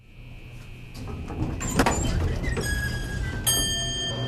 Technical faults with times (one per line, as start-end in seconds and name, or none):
1.81 damaged data in a compressed stream
4.09 damaged data in a compressed stream